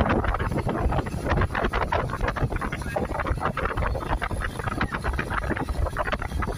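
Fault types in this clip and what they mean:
No audible faults present.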